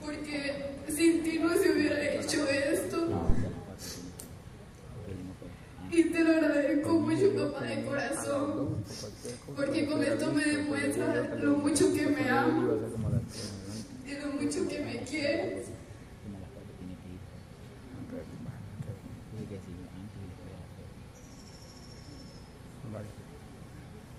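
At 3.30 s a phantom power thump is heard: a deep, low thud peaking at about -12 dBFS and falling away within roughly 46 ms, over by 3.50 s. A supply switching on or off on a live input pushed a voltage step through the coupling capacitors.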